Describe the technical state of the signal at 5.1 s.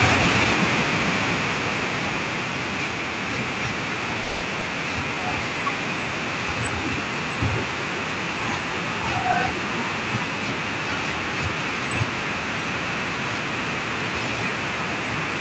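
At 5.1 s the signal is inside a jitter buffer slow-down running from 4.96 to 5.21 s. The receiver, short of buffered audio, repeated single pitch periods back to back, stretching the segment by 49 ms so it plays at about 83% speed with unchanged pitch. The speech sounds briefly drawn out. On a waveform, identical cycles repeat in a row; on a spectrogram, harmonics run flat and elongated beneath the Opus call path's 8 kHz ceiling.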